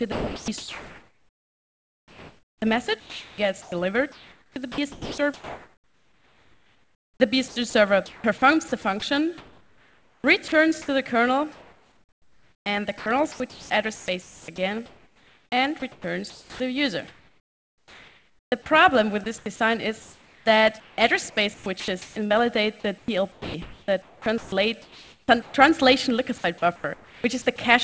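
Likely the sender's voice detector repeatedly stopped transmitting, chopping the sound: from 0.12 to 10.88 s, 11.52 to 18.66 s, 19.24 to 25.54 s and 26.38 to 27.58 s, quieter stretches drop into comfort noise.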